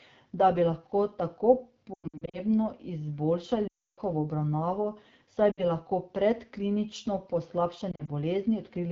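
Throughout, the speech carries the AMR wideband (HD Voice) codec at a low rate that fits 8.85 kbit/s. It sounds rough and raspy. A spectrogram shows smeared harmonics below 6.4 kHz and a shaped noise band from 6.4 to 7 kHz.

Lost AMR speech frames follow. From 1.93 to 2.39 s, after "da bi lahko tako", the decoder repeats the last good settings with falling gain, giving warbles and dips. These are scattered gaps totalling about 260 ms, the longest about 100 ms, and they show as ragged dropouts in the waveform. From 3.67 to 4.00 s, just before "obravnavo saj", a run of about 300 ms fades to silence. The spectrogram shows a frozen, dimming spectrum and then a blank stretch. At 5.51 to 5.64 s, between "obravnavo saj" and "lahko predklinično", a brief dip lasts about 60 ms. From 7.91 to 8.10 s there are short warbles spread across about 160 ms.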